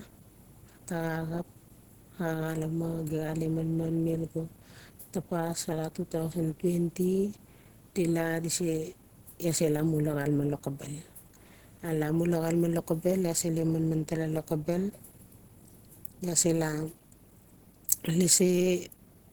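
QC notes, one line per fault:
Throughout, Opus compression: the encoder was likely starved of bits, at a rate that fits 16 kbps, with hybrid mode coding the low band as speech; the speech comes out plainly hoarse, rough and grainy, though the band still reaches about 20.2 kHz.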